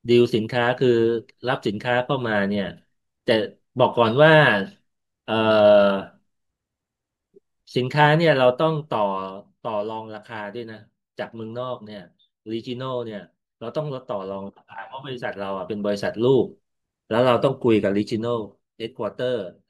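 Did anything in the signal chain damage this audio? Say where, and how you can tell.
Yes. During the two level drops, from 8.49 to 10.01 s and from 18.02 to 19.20 s, a fine ticking or zipping rides on the speech while the level falls by about 10 dB. This is zipper noise from a gain stage in the processing or buffer path. The level is updated in discrete steps around a hundred times a second, which fits one update per buffer of roughly 10 ms. Because nothing smooths the gain between steps, each jump leaves a small click.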